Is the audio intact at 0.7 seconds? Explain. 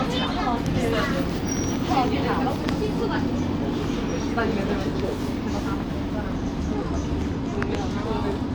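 No, not quite. There's a loud pop from about 0.66 to 0.68 s, a single sharp thump well above the surrounding sound, which carries on underneath. It's likely a sudden voltage step, say from a switch or static, riding on the signal.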